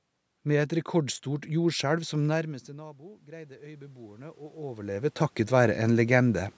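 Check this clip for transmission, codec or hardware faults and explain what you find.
One system fault shows up in the speech. From 2.41 to 5.14 s there is automatic gain rising. The input level fell by about 21 dB when the talker moved away around 2 s, and the gain control climbed about 8 dB to make up for it. Voice and room noise swell together over nearly three seconds.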